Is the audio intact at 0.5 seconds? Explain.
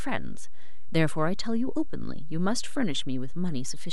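No. At 0.5 s, as across the whole clip, nothing odd is audible, but a DC offset of about -23 dBFS shifts the waveform off zero, costing headroom and adding steady energy at the lowest frequencies.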